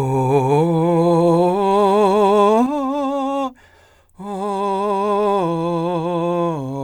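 A music recording with one channel dropping out from 2.66 s to the end. At that point the sound falls abruptly by about 6 dB and stays there, and any material carried only on the missing side is gone. The likely cause is a lost stereo channel folded down to mono.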